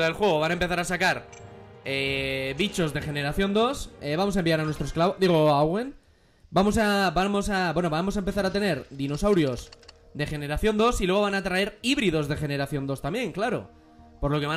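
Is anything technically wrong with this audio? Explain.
No, nothing is technically wrong with this audio.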